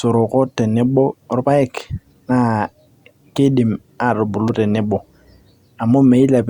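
Loose connector crackle breaks into this speech clip from 4.48 to 4.55 s: a brief, irregular burst of scratchy crackle. A worn or dirty contact is making and breaking as it shifts, chopping the signal in rapid bursts, with pops from any DC on the line.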